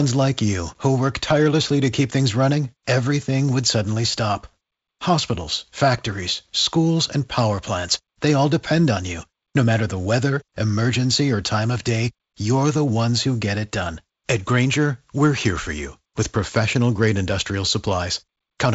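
No technical faults occur in this speech clip, which carries G.722 wideband telephone coding with nothing above about 7.7 kHz.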